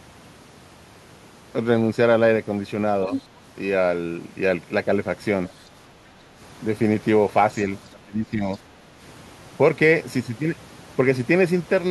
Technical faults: other side's voice leaking through; background gated by the echo canceller; speech suppressed in double talk

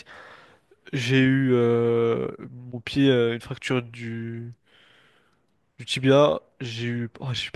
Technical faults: none

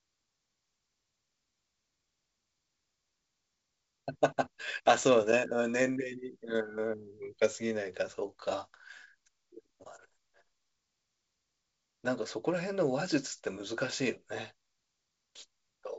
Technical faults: none

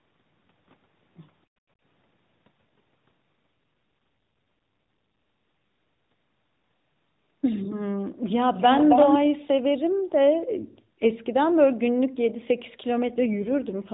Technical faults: background gated by the echo canceller; AMR rate drop; echo leak

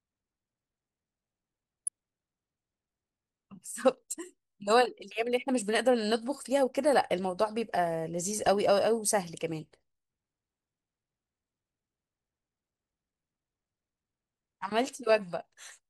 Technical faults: MP2 compression; DAB burbling

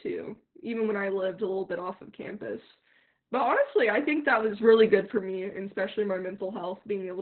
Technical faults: Opus voice compression; sudden gain jump

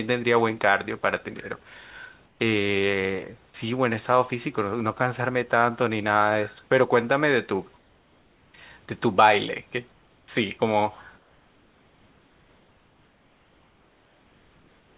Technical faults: comfort noise in place of the background

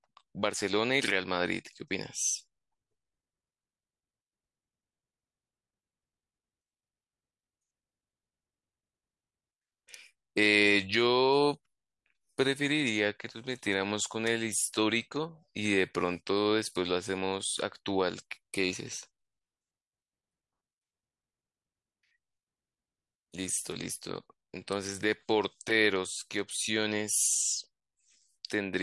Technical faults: none

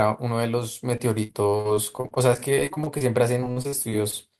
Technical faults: repeated packet loss (robotic sound)

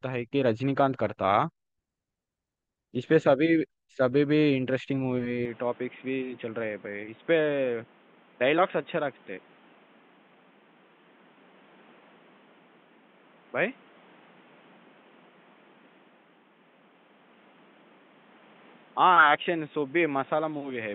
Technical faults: input switched to a poorer device

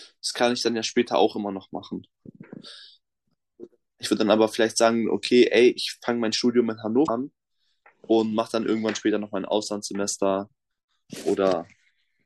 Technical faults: damaged data in a compressed stream

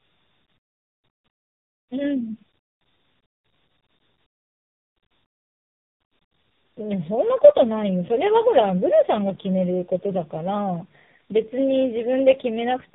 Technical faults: tandem speech coding

